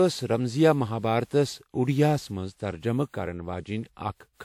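From start to finish the speech carries generation loss: a swirly, hollow smear, blurred consonant attacks and a top end that stops near 19.3 kHz. The likely cause is repeated lossy re-encoding, around seven passes, in a chain consistent with WMA at about 96 kbit/s. Each pass quantises on a shifted frame grid, so noise and spectral holes pile up beyond what that bitrate alone would produce.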